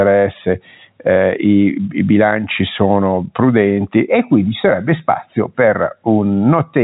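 No technical faults can be heard in the speech, which carries the narrow band of G.711 telephone coding with nothing above 3.8 kHz.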